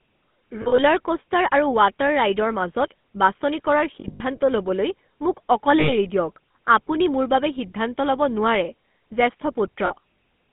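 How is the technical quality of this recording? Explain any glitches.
The quality is poor: the whole recording has passed through a narrowband mobile codec, and it also drops out briefly in four places.

The speech was carried by the GSM full-rate codec at 13 kbps. That codec rebuilds the voice from a vocal-tract model driven by a thinned, regularly spaced pulse excitation, and the line passes only about 150 Hz to 3.5 kHz. The clip therefore sounds boxed-in and dull. The codec damage is plainly audible throughout as a buzzy, gravelly roughness.

Lost GSM frames occur at 0.62–0.80 s, at 4.00–4.21 s between "বাছনি কৰাৰ" and "ল'বলৈ মোক", at 5.80–5.93 s just after "ল'বলৈ মোক", and at 9.86–9.93 s. The decoder covered the missing audio (about 100, 120, 80 and 40 ms) by repeating the last good frame's settings. Each gap is heard as a brief rough, metallic ringing smear in place of real speech. 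The first two are scattered dropouts whose runs last no more than about 40 ms.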